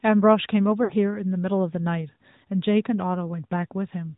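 A speech clip carried over the AMR narrowband mobile codec, which samples at 8 kHz and models the vocal tract. Nothing above 4 kHz survives, and the plainly buzzy, synthetic texture fits a mid-range bitrate around 10 kbps. From 0.84 to 0.93 s, lost AMR speech frames made the decoder repeat its last pitch and vocal tract settings at falling gain. This drew out and faded about 60 ms of sound before it returned briefly weak or rough.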